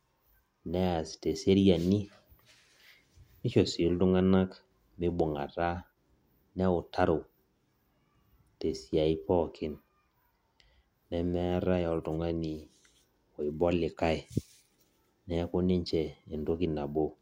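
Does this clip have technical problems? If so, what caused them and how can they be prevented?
No, the speech signal shows no technical faults, so there is nothing here that needs a cause traced or a prevention step.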